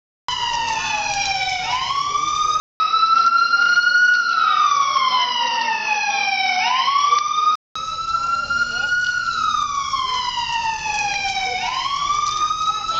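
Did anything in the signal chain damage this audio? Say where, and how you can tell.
Yes, at the input stage: from 2.6 s to 7.76 s everything above 6 kHz vanishes, a faint new noise floor and a level shift of a few dB arrive, and a 200 ms gap marks the switch. That's likely an input switched to a poorer device.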